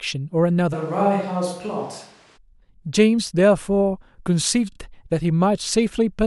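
A speech recording with two faults. From 0.75 to 2.36 s the sound turns hollow and roomy, about 5 dB quieter, with room noise about 30 dB below the speech. A switch to a distant microphone is the likely cause. At 4.72 s a 32 ms block repeats twice more, giving a brief stutter until 4.78 s. These repeated frames add 64 ms to the clip.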